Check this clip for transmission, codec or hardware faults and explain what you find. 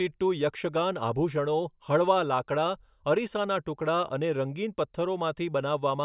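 Nothing stood out on listening to this speech recording, with no audible problems anywhere in it.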